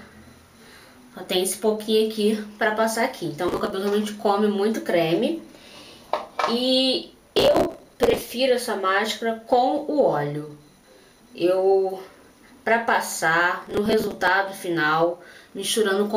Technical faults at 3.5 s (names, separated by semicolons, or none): processor overload crackle